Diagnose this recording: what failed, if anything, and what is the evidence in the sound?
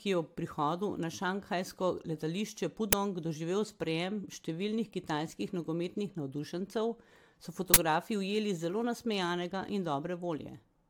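Generation loss, throughout: the speech sounds swirly, smeared and hollow, with blurred consonant attacks and nothing above 19.4 kHz. This is likely a codec-stage problem: the audio appears to have been re-encoded about three times, consistent with AAC-LC near 96 kbit/s. Each pass requantised on a shifted frame grid, so noise and spectral holes accumulated.

Uninitialised buffer, at 2.93 s, between "prihodu na šanghajsko letališče" and "doživel sprejem številnih kitajskih", and again from 7.74 to 7.76 s, just before "ujeli zelo nasmejanega in": a loud crack, then a short, loud burst of digital noise. At the driver or buffer stage, blocks were played before audio was written, so stale memory came out as samples. The events fit a 256-sample block and a 1024-sample block.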